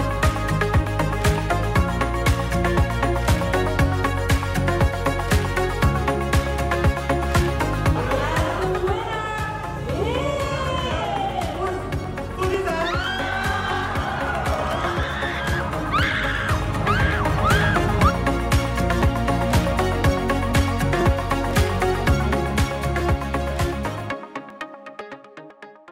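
From 11.05 s to 25.50 s, periodic USB or driver dropouts skip roughly a millisecond of audio every 0.499 s, heard as regular ticks while sound plays.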